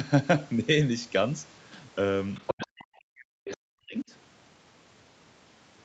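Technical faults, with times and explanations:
2.35–2.81 s and 3.45–3.53 s, other side's voice leaking through: a second voice slips in, fairly loud at first (about 5 dB under the talker), then a brief fainter scrap, likely leftover loudspeaker echo the canceller missed.
2.56–4.11 s, speech suppressed in double talk: the talker drops away by as much as about 40 dB for roughly a second and a half, likely the canceller ducking everything while both sides overlapped.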